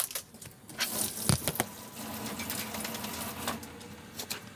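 From start to finish, everything runs twice as fast and a full octave higher, pitch and tempo shifted together. This is a wrong sample rate fault: the samples are played back without conversion at double their original rate, which fits 16 kHz material played at 32 kHz.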